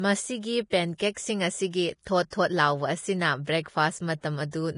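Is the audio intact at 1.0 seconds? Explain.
No. At about 0.98 s, just before 1.0 s, there is pre-echo. A burst of hiss leads into an attack and lasts about 19 ms. The codec spreads its quantisation noise across a whole block, so noise meant for the loud onset also fills the quiet gap ahead of it. The attack then sounds soft and smeared.

The whole clip, including this moment, is also hissy and grainy, with nothing above 10.5 kHz. That points to heavy Vorbis compression, likely at a low bitrate near 31 kbps. The treble is quantised so coarsely that its fine detail turns into noise. The speech tones sound roughened.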